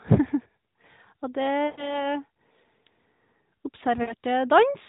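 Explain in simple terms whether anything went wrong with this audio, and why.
Something did go wrong. There are two stretches of lost AMR speech frames, from about 1.66 to 2.08 s and from about 4.02 to 4.14 s. The call's radio link garbled bits of the signal, so the phone's decoder guessed, reusing the last good sound and fading it. You hear speech briefly smear and dip, then come back a bit rough. The first gap fits about six lost frames, and the second about three.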